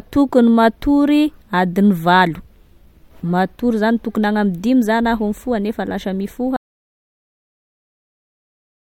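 A speech clip with an audio dropout to silence. At 6.57 s the speech cuts off mid-flow. Silence runs to the end, about 2.4 s, with no room tone. The input was likely lost while recording continued, writing silence.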